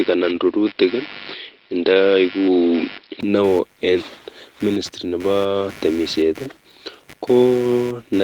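A faint buzz with a rapid pulse, about 100 per second, runs under the speech from start to end, roughly 25 dB below it. This is computer activity noise: processor or peripheral load disturbing the shared ground of the audio circuit and leaking into the signal.

From 0 to 3.23 s the speech sounds dull and boxy, with nothing above 5.4 kHz and a faint, very low added hiss. A 20 ms gap at 3.23 s precedes the return of full, clear tone at the same loudness. The cause is likely the input switched to a poorer device, a narrower-band microphone or headset call profile.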